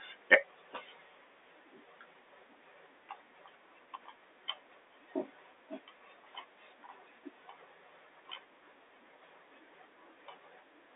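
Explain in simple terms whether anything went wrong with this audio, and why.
Nothing went wrong with this speech recording. It has the narrow sound of an ordinary phone call because G.711 telephone coding only carries roughly 300 Hz to 3.7 kHz, which is normal for a landline and not a problem.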